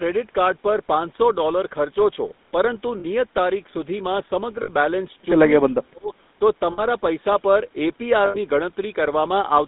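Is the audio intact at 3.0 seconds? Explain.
No. At 3.0 seconds the audio breaks up with lost GSM frames, lasting to 3.05 s, about 40 ms. The decoder filled the gap by repeating the last good frame. The result is a short, rough, metallic ring in place of the real sound.

The whole clip also carries the GSM full-rate codec, so this moment is affected too. The codec rebuilds the speech from a vocal-tract model driven by sparse, regular pulses. The line band runs from 200 Hz to 3.7 kHz. The damage is plainly audible as a buzzy, gravelly roughness.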